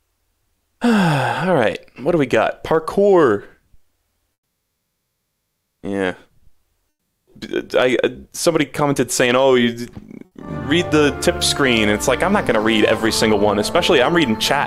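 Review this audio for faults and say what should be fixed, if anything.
From 4.33 to 5.81 s there is a call audio freeze. The last sound stretches into a fading buzz or hiss, then 0.36 s of silence. Delayed packets likely emptied the jitter buffer. Nothing is lost.

A long network dropout runs from 6.89 to 7.29 s. The sound fades out and ends in 0.06 s of silence. The likely cause is no packets arriving. About 0.38 s never returns.

A burst of packet loss hits at 10.25 to 10.33 s. The last sound is held and fades, and 60 ms is skipped.

From 11.0 to 14.57 s a jitter buffer speed-up plays the audio 7% fast at unchanged pitch. Short pitch-period slices are cut, roughly 0.3 s in total. It sounds hurried.

A steadier network path and a better-tuned jitter buffer would prevent these faults.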